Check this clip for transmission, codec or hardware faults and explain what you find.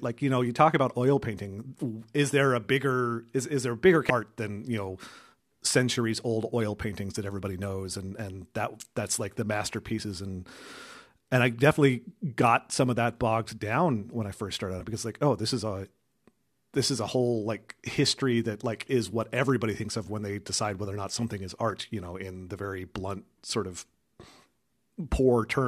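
Three faults are audible, all of one kind. Damaged data in a compressed stream occurs at 4.09 s (between "is there a bigger" and "art than you know"), 14.79 to 14.81 s (after "when I first started", before "it because like oh") and 21.70 to 21.72 s (after "or not something is", before "you know in the"). Corrupted bytes make the decoder misread frames and lose sync until the next frame header, leaving a brief disturbance of about 14 to 24 ms. Unlike clipping or a steady buffer fault, these are isolated and irregularly spaced.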